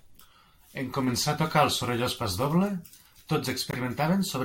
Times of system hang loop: none

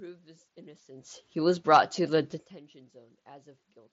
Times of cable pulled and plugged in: none

